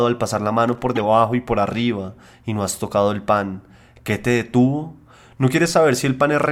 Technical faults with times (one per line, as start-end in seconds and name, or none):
0.68-0.81 loose connector crackle
0.95-1.01 corrupt frame decoded